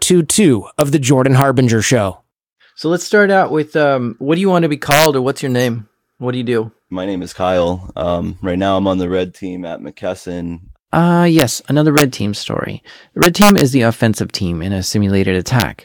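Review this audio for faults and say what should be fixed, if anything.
Violent cracks break through the speech at 0.81, 1.42, 4.91–5.06 (after "you want to be"), 11.39–11.42, 11.98–12.02, 13.23–13.61 and 15.60–15.62 s. These come from integer overflow: peaks pushed up to about 3 dB past full scale wrap to the opposite sign instead of being held at the limit. Use saturating arithmetic or a limiter ahead of the integer conversion so that peaks clamp rather than wrap.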